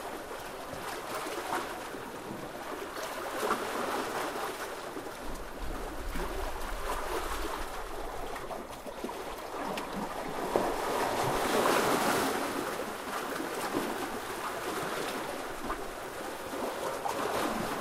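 No technical faults can be heard anywhere in this recording of sounds.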